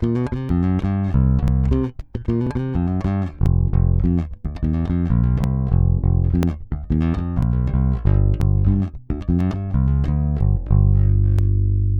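From 0.49 s to 11.39 s the audio is broken by periodic USB or driver dropouts, repeating every 0.99 s, about ten in all. At each one something holds up the USB bus or the audio driver, and roughly 10 ms of signal is skipped, not padded with silence, so the waveform jumps across the gap. The result is a steady tick or small pop at each interval, heard only while signal is present.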